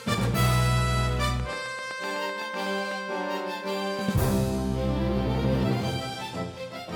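A train of clicks runs from 1.40 to 2.93 s: about fifteen evenly spaced ticks at 7.9 per second, peaking roughly 5 dB above the sound, likely from electrical interference.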